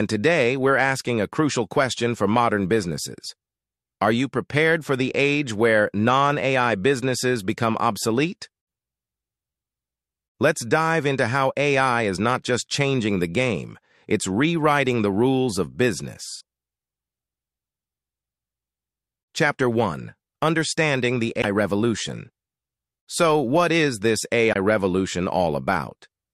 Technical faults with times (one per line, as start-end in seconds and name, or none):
16.37-16.41 damaged data in a compressed stream
21.38-21.45 damaged data in a compressed stream
24.49-24.56 damaged data in a compressed stream